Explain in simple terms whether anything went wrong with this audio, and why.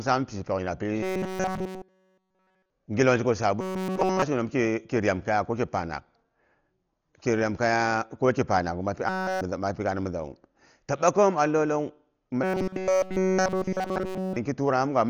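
Two things went wrong. First, the whole recording was squeezed hard to save space, most likely with Dolby Digital compression set very low. To fit, the encoder narrowed the range of sound it kept and skimped on detail within it, filling gaps with noise. The speech therefore sounds dull and muffled throughout, as if heard through a wall, with a rough, fluttering haze around the voice.

Second, the audio stream stalled in four places, at 1.03–2.70 s, 3.61–4.22 s, 9.09–9.41 s (just before "nza mapi gaana mizawu") and 12.44–14.36 s. The player likely ran short of fresh audio and kept replaying one tiny slice over and over while the real sound was skipped. That is robotic sound from repeated short buffers. The endless looping stamps a steady 188 Hz buzz onto the voice, turning it metallic and machine-like during those stretches.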